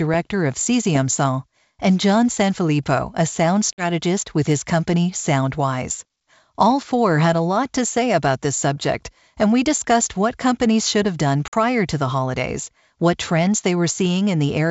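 At 3.73 to 3.84 s and again at 11.48 to 11.54 s the speech breaks off in a hard-edged silent hole of about 50 ms, the mark of packet loss on an ADPCM call, with a handful of packets gone each time. What separates it from a simple dropout is the recovery: the decoder's adaptive predictor and step size no longer match the sender's, so the speech comes back slightly distorted, settling over the next few tens of milliseconds.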